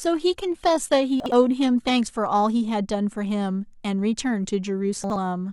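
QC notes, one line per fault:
0 to 2.0 s, adaptive stream starting at a low bitrate: the speech opens thin, with the top end smeared and swirly. That fits a low-bitrate start around 20 kbit/s HE-AAC while the player sizes up the link. At 2.0 s it jumps cleanly to fuller sound, closer to a 96 kbit/s AAC-LC stream, with no gap.
1.2 to 1.32 s and 5.04 to 5.16 s, chunks out of order: each spot has a brief jumbled stutter. Two 60 ms pieces swap, so one plays a chunk late. Nothing drops out, but the hard joins at the swapped edges give the garbled moment.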